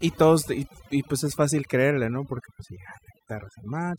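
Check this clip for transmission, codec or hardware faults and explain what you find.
One fault, and it's processing rather than transmission or hardware. Overdone noise removal runs the whole way through. The denoiser's set too hard, so bands near its noise estimate get gated out, leaving twinkly specks in near-silent gaps and taking quiet parts of the voice with them.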